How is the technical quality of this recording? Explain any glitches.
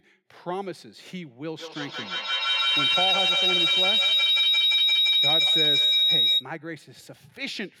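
The recording has one serious fault, a feedback howl running from 1.59 s to 6.5 s. Two devices in the same room were on the call, so sound from a loudspeaker reached a microphone and went round the loop again, gaining level on each pass. The loop favoured a band around 4 kHz, so the repeats, coming roughly every 150 ms, the loop's delay, narrowed into a shrill tone that peaks at about 10 dB above the speech before stopping.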